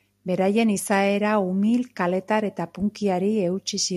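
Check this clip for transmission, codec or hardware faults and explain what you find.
Nothing in the speech points to a transmission, codec or hardware fault.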